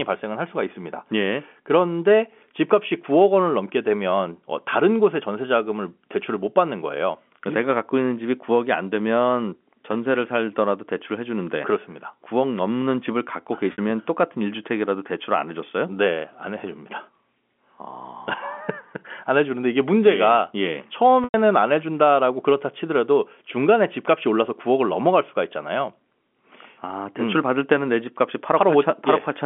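Packet loss with pitch repetition occurs twice in this speech clip, at 13.72 to 13.78 s, where about 60 ms is missing, and at 21.24 to 21.34 s, where about 100 ms is missing. The gaps fit runs of three and five 20 ms packets. At each gap the receiver loops the last pitch cycle it received and fades that copy out over about 50 ms, and the speech resumes through a short cross-fade. The telephone band of G.711 coding, 200 Hz to 3.4 kHz, can be heard throughout.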